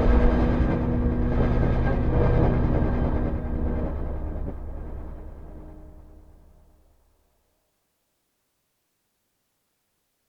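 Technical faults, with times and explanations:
No technical faults detected; signal path checks out with nothing to flag.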